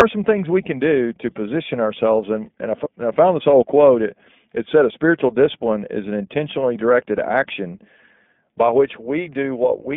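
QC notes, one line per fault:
throughout: iLBC codec. The sound is confined to roughly 150 Hz to 3.6 kHz and has a slightly rough, synthetic edge, which fits iLBC's 15.2 kbps mode. Unlike a plain band-limit, the grain comes from each 20 ms frame's excitation being coded independently.
2.84–2.87 s: lost iLBC frames. Just before "found this old quote", a brief buzzy, held vowel-like fill replaces the audio, which fits one lost 20 ms frame concealed by repeating the last pitch cycle with noise. Unlike a dropout, there is no silence, and clarity returns immediately.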